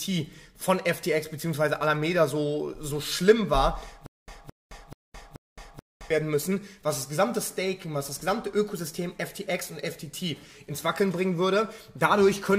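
From 4.06 to 6.10 s there is a stutter with silent gaps. A 216 ms burst repeats four times, each followed by 217 ms of digital silence. A stalled stream is the likely cause.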